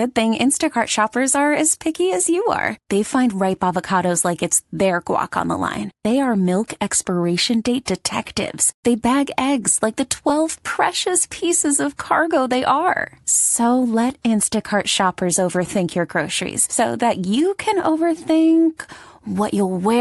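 Bluetooth LC3 compression runs through the whole of this speech recording, with plainly audible coding damage that is likely the result of LE Audio's transform codec working frame by frame on short 10 ms blocks, at a rate that fits roughly 48 kbps. Lost LE Audio frames cause brief dropouts at 6.04 s, 10.29 s and 14.96 s, each about 10 ms and consistent with a single missing frame. At each gap the decoder repeats the previous spectrum with scrambled phase, so it sounds like a short noisy smear rather than silence.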